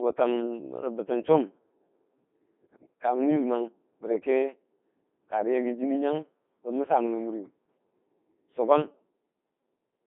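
Across the whole clip the speech has the robotic, buzzy character of the Codec 2 vocoder. Only pitch, voicing, energy and a coarse spectral envelope survive, and the decoder rebuilds the voice from sine waves, so the original waveform is gone. The damage is heavy, and the thin texture fits the 2.4 kbit/s mode. The band is confined to roughly 250 Hz to 3.6 kHz, giving a narrow, radio-like sound with no low body or high air.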